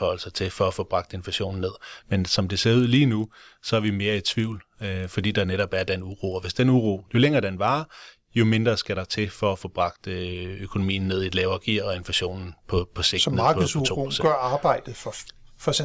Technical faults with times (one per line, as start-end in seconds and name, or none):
2.80-6.52 resampler restarted on every block